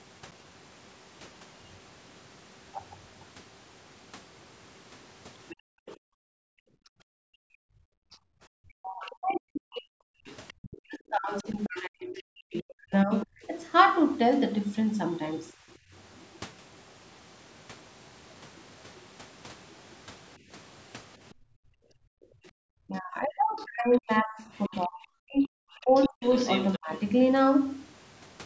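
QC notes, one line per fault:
5.5 to 16.25 s and 21.3 to 26.78 s, other side's voice leaking through: a second voice sits under the talker, roughly 20 dB down in the first stretch and about 15 dB down in the second. This is likely far-end audio from the loudspeaker reaching the microphone and left in by the echo canceller.
5.56 to 8.34 s, 15.54 to 15.92 s and 21.34 to 22.52 s, background gated by the echo canceller: while the loudspeaker plays, the canceller clamps the microphone and the room tone drops away by about 40, 19 and 36 dB. The dips total roughly two seconds, a third of a second and one second. The background returns each time the canceller releases.
7.22 to 13.5 s and 22.8 to 26.92 s, speech suppressed in double talk: the talker's own voice dips and breaks up in pieces while the other side is speaking, losing as much as roughly 40 dB over about four seconds and then two seconds in total. 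The likely cause is the canceller treating overlapping talk as echo and turning both voices down.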